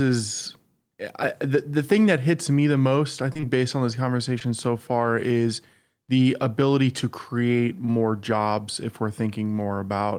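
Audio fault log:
3.33 to 3.46 s, short concealed packet loss: Three 20 ms gaps cluster after "me the most I" and before "based on this". The receiver patches each with 13 to 19 ms of extended sound, then blends back. The patches stack into a brief smear, with a small added delay.
4.39 to 4.48 s, short concealed packet loss: One 20 ms gap after "based on this", before "so far is the", gets an 11 ms fill. A short wobble results.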